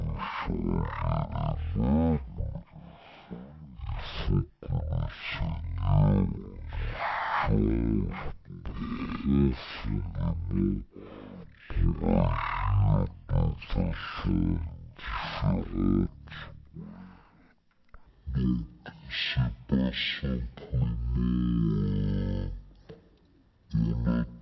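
Across the whole clip the sound runs at about 0.36 times normal speed and about 17.6 semitones low, a wrong sample rate that fits 44.1 kHz material played at 16 kHz. Unlike a pitch shift or time-stretch alone, pitch and tempo drop together.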